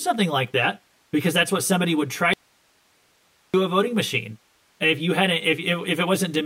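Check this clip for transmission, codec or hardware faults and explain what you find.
Two faults are present in the speech.

Channel delay (comb filtering) runs throughout: the sound is hollow and phasey because one channel lags by roughly 10 ms before mono summing, cutting notches from around 50 Hz upward.

From 2.33 to 3.54 s, an audio dropout to a faint residue leaves about 1.2 s of hiss roughly 40 dB down. The signal was likely lost while the downstream path stayed live.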